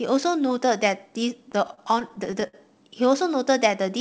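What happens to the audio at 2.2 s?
At 2.2 s the audio is in the middle of repeated stalls (stutter), which run from about 1.52 s to 2.55 s. Packets arrived late, so the jitter buffer kept running dry, about ten times in that stretch. Each time the receiver stretched the last sound to cover the wait, the longest being 59 ms and roughly 173 ms in total, about 17% of the span. Nothing is lost, but the speech drags and hiccups through the band-limited G.722 call audio.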